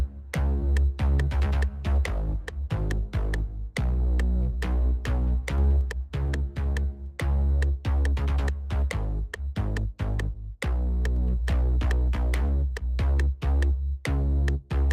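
No technical faults are audible.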